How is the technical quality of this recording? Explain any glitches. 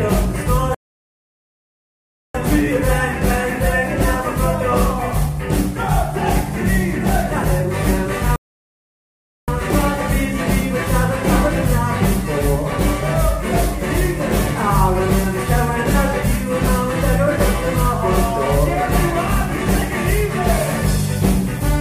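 Two rebuffering stalls interrupt the recording. From 0.75 to 2.35 s and again from 8.36 to 9.48 s, the player drained its downloaded audio and waited for more. Each time the sound drops to silence, then picks up exactly where it stopped, adding 1.6 s and 1.12 s.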